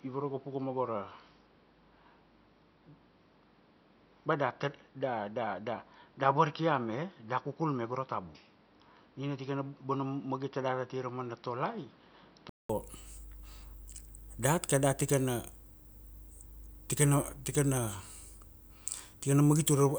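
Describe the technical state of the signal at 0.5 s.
At 0.5 s the speech is dull and boxy, with nothing above 5.7 kHz and faint added background noise. This lasts from 0 to 12.69 s and ends in a 200 ms silence. It is likely an input switched to a poorer device.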